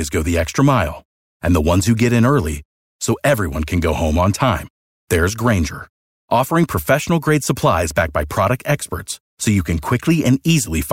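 Speech, with a block size mismatch (truncated) from 2.55 to 3.99 s, after "ones who get in" and before "on time there's". A buzz at about 92 Hz runs through it. One stage is writing longer blocks than the next reads, so each block's tail is dropped at that rate. Pace and pitch stay normal.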